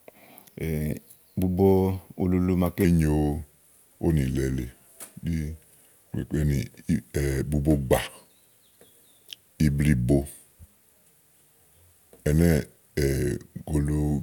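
From 2.85 s to the end, a section at the wrong speed: playback was likely run off a mismatched clock, at 0.853 times the recorded speed. Pitch and tempo fall together, so the speech drops about three semitones and drags, sounding deeper and slower than before.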